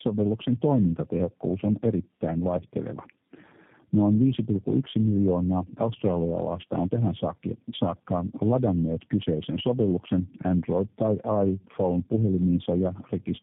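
From start to finish the speech sounds rough, muffled and warbly, with nothing above 3.8 kHz. That points to tandem speech coding: repeated passes through low-rate coders such as G.729A, each re-encoding the previous one's already degraded output, so the damage compounds.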